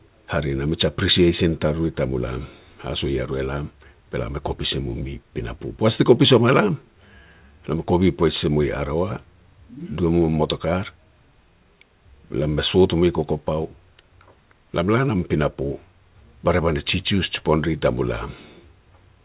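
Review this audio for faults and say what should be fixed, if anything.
Nothing in this speech needs fixing. It has come through a WebRTC call path working as expected, with nothing above 4 kHz, which fits narrowband G.711 mu-law at 64 kbps.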